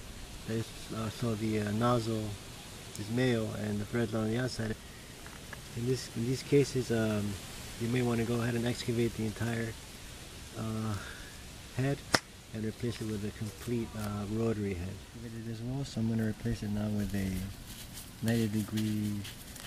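No technical faults detected.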